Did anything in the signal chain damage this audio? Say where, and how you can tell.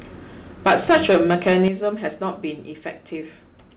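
Yes. From 0.66 to 1.68 s the loudest syllables turn harsh and crackly, with flattened peaks. Around a tenth of the samples there sit pinned at the converter's limit. This is likely microphone overload at the converter. The input ran about 10 dB too hot, so the tops were sheared off.

At 0.68, 1.68 and 2.7 s the whole level drops abruptly, background included, by about 3, 8 and 2 dB. This is the microphone volume stepped down, likely by call processing reacting to the clipping. The largest step ends the distorted stretch.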